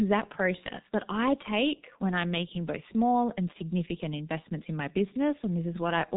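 From start to finish the speech carries heavy G.723.1 codec damage. Nothing above 3.8 kHz survives, so it sounds muffled, and the coarse 30 ms frames and slow-updating voice model at roughly 6.3 kbit/s leave a hoarse texture with smeared, indistinct consonants.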